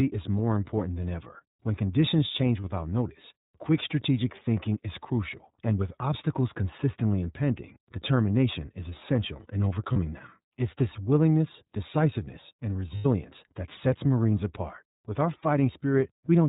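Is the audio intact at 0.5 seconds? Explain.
No. At 0.5 s the speech is passing through the iLBC codec, which affects the whole clip rather than this moment alone. The codec encodes each frame's excitation independently of the previous one, and the character here fits its 30 ms frame mode at roughly 13.3 kbps. Everything above 4 kHz is removed, so the speech sounds narrowband and muffled, and the coding damage is plainly audible as a rough, slightly synthetic texture.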